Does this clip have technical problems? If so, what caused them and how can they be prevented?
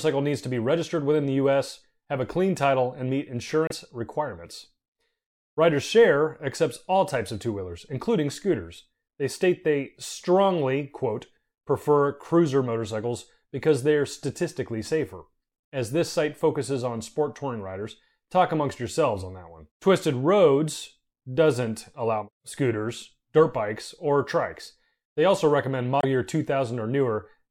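Yes. Two brief glitches interrupt the speech, at 3.67 to 3.72 s and 25.98 to 26.05 s, which is damaged data in a compressed stream: corrupted bytes made the decoder misread frames and resynchronise. Verifying files with checksums and using error-protected transport prevents this.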